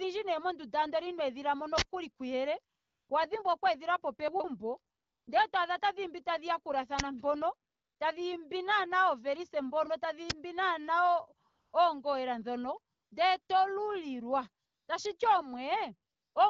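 At 1.78 to 1.82 s, and again at 6.99 s and at 10.30 s just after "tadhiimbi naana oovelise mpono", an uninitialised buffer plays: leftover memory is output as samples, giving a loud crack or burst of digital noise. The first lasts about 47 ms, which fits a 2048-sample block. The later two last about 12 ms, which fits a 512-sample block. Unlike a click, the first, longer one is a sustained noise block rather than a single spike.

Between 4.28 and 4.44 s, chunks play out of order. A 40 ms chunk arrives three chunks late and plays after the audio that should follow it. This produces a jumbled moment with three hard joins. Unlike a dropout, no audio is missing; it is only rearranged.

AMR comfort noise appears at 2.75 to 3.09 s, 4.95 to 5.27 s, 7.69 to 7.99 s (just before "tadhiimbi naana oovelise mpono"), 11.49 to 11.73 s, 12.93 to 13.11 s, 13.41 to 13.47 s, 14.65 to 14.87 s (just after "ndele to lulilwa") and 16.11 to 16.35 s. 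These gaps run from 60 to 340 ms. During each one the speech frames stop and the real background is swapped for smooth synthetic noise that switches in and out. Unlike a plain dropout, the gap is filled rather than silent. The AMR-WB path at 12.65 kbit/s keeps the speech clear, with only light coding damage.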